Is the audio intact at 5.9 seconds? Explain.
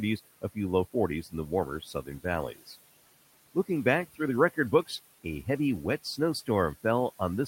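No. Noise suppressor artifacts run through the whole clip, including 5.9 s. The suppressor pulls down bands it judges to be steady noise frame by frame, cutting the room noise, about 19 dB below the speech, by about 16 dB, so it sinks between words and rises beneath them.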